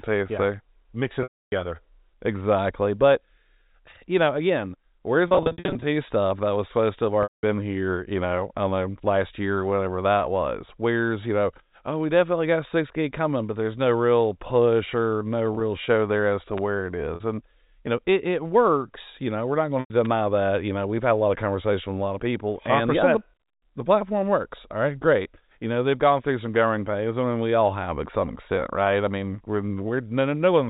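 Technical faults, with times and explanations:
1.23 to 19.90 s, packet loss with pitch repetition: gaps at 1.23 s (290 ms), 5.28 to 5.84 s (350 ms scattered), 7.23 s (200 ms), 15.53 s (40 ms), 17.15 s (50 ms) and 19.80 s (100 ms). The receiver loops the last pitch period, so short gaps sound held and buzzy, and longer ones fade to silence.
16.58 s and 20.05 s, electrical switching spike: a sharp snap sits on top of the sound each time, likely an arc from a nearby switch or discharge coupling into the line.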